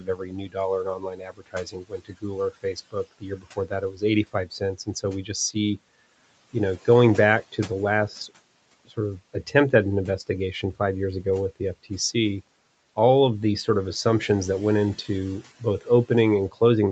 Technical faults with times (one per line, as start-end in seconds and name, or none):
0.00-0.57 speech cut by the noise suppressor
0.84-2.24 speech cut by the noise suppressor
2.51-4.02 speech cut by the noise suppressor
4.33-5.04 speech cut by the noise suppressor